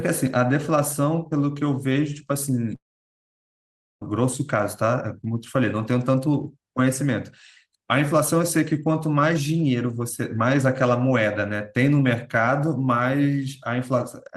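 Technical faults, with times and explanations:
2.75–4.02 s, long network dropout: the speech cuts off, a brief fading buzz carries the last sound, then about 1.2 s of near silence follows. Speech resumes later with roughly 1.26 s missing, likely from lost packets. Unlike a short glitch, concealment gives up and nothing is recovered.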